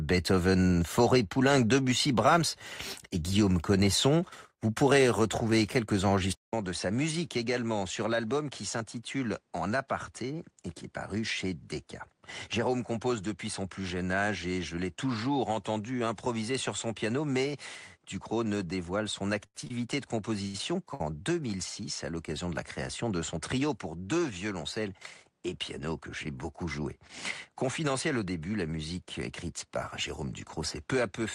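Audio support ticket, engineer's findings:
Input switched to a poorer device, likely, at 6.33 s after "vous pourrez retrouver quelques": 200 ms gap, then duller audio with nothing above 10.5 kHz, a few dB quieter, new faint noise floor to end.

Short stalls from late packets at 19.46 s (89 ms), 19.64 s (20 ms), 19.67 s (28 ms), 20.47 s (71 ms), 20.94 s (58 ms): jitter buffer underrun, sound held then resumed, nothing lost.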